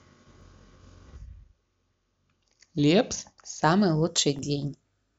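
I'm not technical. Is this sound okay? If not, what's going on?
No. From the start to 3.63 s the speech drags and sits about two semitones low. This is a section at the wrong speed, likely played at about 0.89 times its proper rate.

Tiny ticks at 0.41 s, 3.23 s and 4.39 s are each a block of digital silence, a 2.9 ms dropout that fits a 128-sample chunk left empty.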